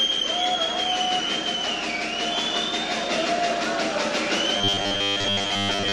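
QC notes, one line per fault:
4.58 to 5.92 s, robotic sound from repeated short buffers: a rigid metallic buzz at 100 Hz, which fits a 10 ms segment looped over most of the real audio, likely because new audio arrived too seldom. Unlike dropouts or stutter, there are no gaps, only a fixed imposed pitch.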